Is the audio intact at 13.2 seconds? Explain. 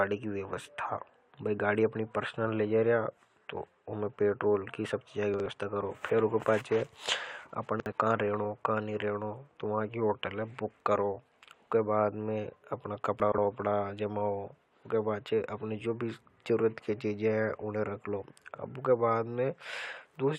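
No. From 13.2 to 13.38 s, chunks out of order: a 60 ms piece plays two chunks late, giving a jumbled moment with three hard joins. Unlike a dropout, no speech is missing.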